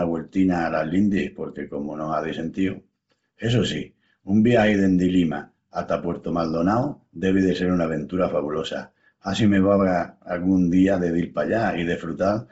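Throughout, the speech sounds breathy and grainy, with nothing above 7.7 kHz and hissy noise standing in for upper detail. The likely cause is heavy Bluetooth LC3 compression. Its 7.5 ms frames, at a rate that fits about 24 kbps, discard the top band and fill it with noise.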